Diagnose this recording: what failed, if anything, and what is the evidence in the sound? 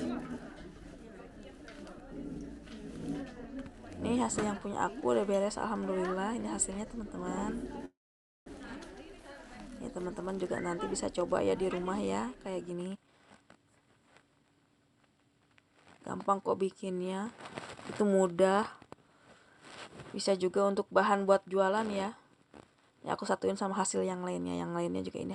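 A call audio freeze at 7.85 to 8.48 s, likely from network packets held up until the jitter buffer ran dry. A brief fading buzz and then silence fill about 0.6 s before sound resumes intact. On a spectrogram there is a short smeared tail, then a blank band of roughly 0.5 s.

A jitter buffer speed-up follows from 12.68 to 15.41 s. The receiver trimmed many pitch-period slices to shed about half a second of backlog, so the sound runs at 121% speed with unchanged pitch. The waveform shows compressed timing, and on a spectrogram the harmonics stay at the same height.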